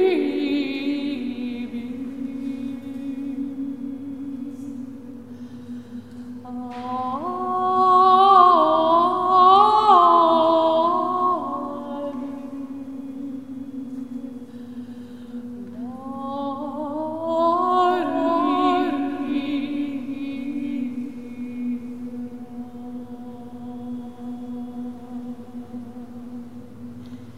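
From 17.91 s to the end, a doubled audio track appears, most likely because the same signal is reaching the mix a second time through a slower path. A full-band copy trails the original by about a second, roughly 5 dB quieter, with no decay or room colour. It cuts in abruptly at 17.91 s, so everything after that point is followed by a dry, softer repeat that overlaps the next stretch of sound.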